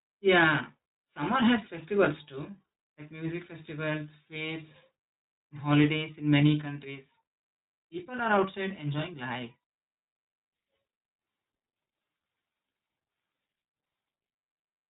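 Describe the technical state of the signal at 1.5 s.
At 1.5 s the speech carries iLBC codec damage, present across the whole clip rather than at this moment alone. The band stops at 4 kHz, so sibilants and breath lose their upper detail. Each short frame, which fits iLBC's 20 ms frames and its 15.2 kbps mode, has its excitation coded without reference to the previous one. That independent coding leaves the voice plainly rough and slightly synthetic.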